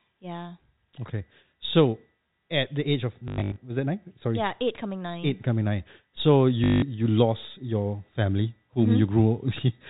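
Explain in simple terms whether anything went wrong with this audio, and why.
Packet loss with last packet repeated: sound went missing around 3.28 to 3.56 s and 6.64 to 6.82 s. The receiver replayed old scraps, causing brief robotic stutters over the telephone-band G.711 sound.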